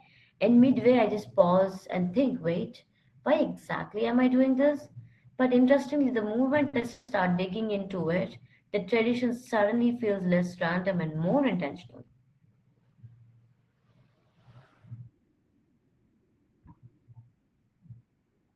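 At 6.67 s, right after "interestingly the moment", there is a short stall from a late packet. A packet arrived late and the jitter buffer ran dry. The last sound is held for about 60 ms, with a slight buzz or dip, then resumes where it stopped. Nothing is lost.

From 6.92 to 7.09 s, after "interestingly the moment I", a call audio freeze follows. The last sound carries on as a fading buzz or hiss for about 160 ms and ends in roughly 10 ms of silence. The likely cause is packets held up in transit. The audio then resumes at "digging into it the" with nothing missing.

From 11.45 to 12.26 s, just after "less random and more", comes a jitter buffer speed-up. The buffer held too much audio, so the receiver cut many tiny pitch-length pieces to shrink the delay. About a tenth of a second is removed. The speech runs at 111% speed and sounds hurried, but the pitch stays the same.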